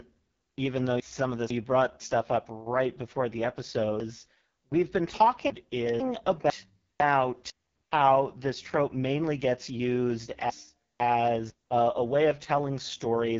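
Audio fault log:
throughout: AMR wideband (HD Voice) codec at its lowest rate, 6.6 kbit/s, with heavy damage. The speech sounds rough and raspy and has nothing above 7.4 kHz. Unlike plain band-limiting, the top band is filled with shaped noise rather than being simply dull.
1.0–2.0 s, 4.0–6.0 s, 6.5–7.5 s, 10.5–11.5 s: chunks out of order. Each of these passages uses 500 ms chunks, and within each one a chunk plays late, by one chunk in three of them and by three chunks at 4.0–6.0 s, just after "up right before the". The first falls after "even though" and before "stuff up right before", and the third sits just before "how this trope mainly". The speech jumps backward and forward at the hard joins. Unlike dropouts or repeats, no audio is missing or duplicated. It is only rearranged.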